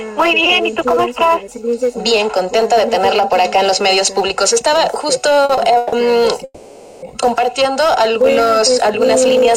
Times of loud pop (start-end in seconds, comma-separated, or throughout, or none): none